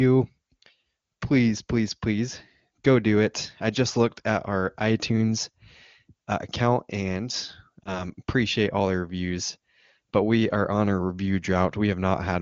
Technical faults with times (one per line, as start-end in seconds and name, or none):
7.84-8.09 lost AMR speech frames